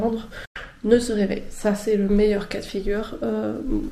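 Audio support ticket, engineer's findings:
Digital broadcast dropout, 0.45–0.56 s: 8 ms fade into roughly 100 ms of silence, fitting four failed frames; the receiver muted until valid frames resumed.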